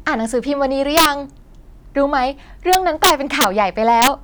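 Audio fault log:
0.97–1.06 s, 2.73–3.44 s, 4.02–4.08 s, integer overflow: the speech peaks get pushed about 2, 4 and 3 dB past full scale, and instead of clamping they wrap to the opposite sign. That full-range flip is why you hear harsh cracks, far nastier than clipping.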